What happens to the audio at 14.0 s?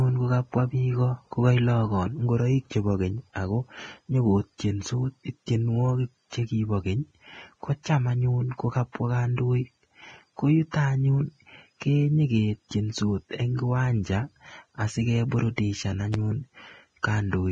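At 14.0 s the speech is dull above 9.7 kHz and grainy in the treble, as it is throughout. This is likely Vorbis compression at a low bitrate, near 20 kbps. Fine high-frequency detail is quantised into hiss, and consonant attacks sound blurred.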